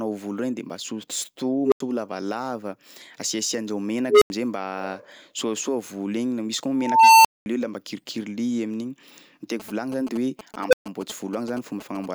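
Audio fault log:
1.61 s, 4.10 s, 6.74 s and 10.68 s: unstable filter. A recursive filter with bad coefficients feeds its output back with gain above unity, so a tone swells: around 400 Hz at 1.61 and 4.10 s (build-up 0.10 s and 0.12 s), around 1 kHz at 6.74 s (0.50 s), around 500 Hz at 10.68 s (0.05 s). Each squeal clips, then the arithmetic overflows and output drops to silence for 85 ms, 85 ms, 213 ms and 128 ms until the filter resets.
9.60–12.06 s: GSM signalling bursts. A nearby 2G handset is signalling with short groups of radio bursts, and the audio circuitry rectifies that RF into the signal path. The result is a galloping dit-dit-dit of brief buzzes with a 217 Hz repetition rate, sitting about 10 dB below the speech and overlapping the 10.68 s squeal.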